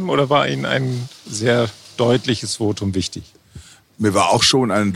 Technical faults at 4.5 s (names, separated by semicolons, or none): none